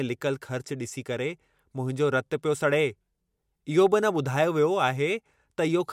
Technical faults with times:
none

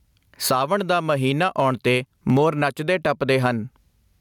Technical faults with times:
0.00-4.21 gain pumping

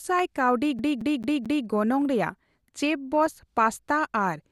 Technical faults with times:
0.00-4.51 MP2 compression
0.79-1.67 CD stuck on one turn

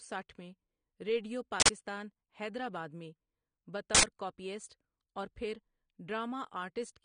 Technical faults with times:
0.00-7.04 AAC compression
1.60-1.69 uninitialised buffer
3.95-4.03 uninitialised buffer

